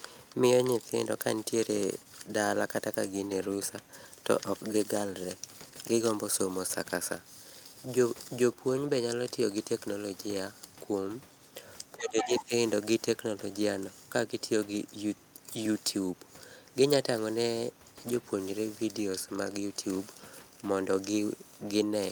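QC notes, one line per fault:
11.95–12.52 s, speech suppressed in double talk: the echo canceller likely mistook overlapping talk for echo and ducked it, so the speech dips by about 15 dB for roughly half a second.
12.18–12.41 s, other side's voice leaking through: echo cancellation likely left residual loudspeaker pickup in the microphone, so a second voice sits only about 5 dB under the speech.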